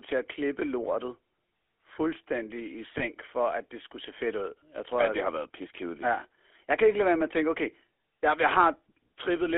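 Throughout, the speech carries the buzzy, gravelly roughness of the GSM full-rate codec. The band runs only from about 300 Hz to 3.4 kHz. The coder rebuilds the voice from a vocal-tract model and sparse pulses, which fits 13 kbps full rate.

From 2.98 to 3.02 s, between "fuldstændig i" and "for at det skulle", lost GSM frames cause a brief rough, metallic hold. The decoder repeated the last good frame's settings. The length points to a single lost 20 ms frame.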